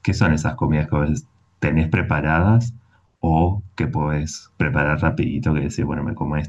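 No technical faults can be heard anywhere in the recording; the signal stays steady and intact throughout.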